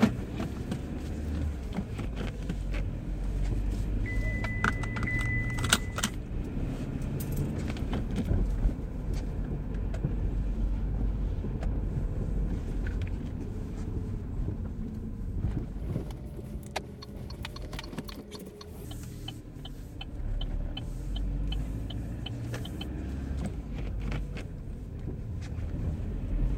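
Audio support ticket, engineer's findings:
Section at the wrong speed, 15.78 to 18.85 s: sound runs fast and high, about 1.42x, pitch up roughly seven semitones. Speed and pitch jump together, then snap back. Likely a playback or edit stage clocking this span at the wrong rate.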